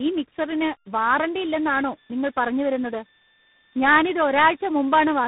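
Tandem speech coding runs through the whole clip. The speech sounds like it passed through three speech codecs in a row, perhaps ending in a CVSD stage. Each coder reworks the last one's damage. Speech turns rough, muffled and warbly, with nothing above 3.8 kHz.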